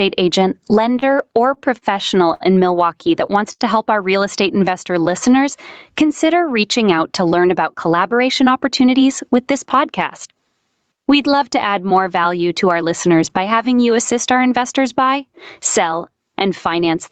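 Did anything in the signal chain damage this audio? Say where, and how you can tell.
Yes. Gain pumping, at the capture stage, runs throughout. The gain swings about 20 dB on loud speech, likely from excessive mic gain driving a fast limiter.

Repeated stalls (stutter) from 0.99 to 2.42 s come from the network and jitter buffer. Four short holds, the longest 63 ms, stretch sound while late packets arrive.

A short stall from a late packet at 3.52 to 3.61 s holds one sound for 66 ms. The buffer ran dry, then resumed without loss.

A jitter buffer slow-down from 4.48 to 5.39 s plays at 92% speed, same pitch. The buffer repeated pitch periods to rebuild its reserve.

A jitter buffer speed-up from 7.37 to 10.37 s runs at 106% speed, same pitch. About a fifth of a second was trimmed, making the speech sound hurried.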